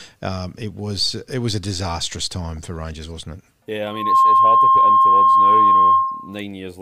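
At 3.86 s a loudspeaker feedback squeal begins and runs until 6.42 s. The microphone is picking up the loudspeaker it feeds, and at 1.1 kHz the loop gain has passed unity, so that frequency reinforces itself on every trip around the loop. It swells from nothing to full strength in about a third of a second and then holds as a steady whistle, some 15 dB louder than the speech, until it stops at 6.42 s.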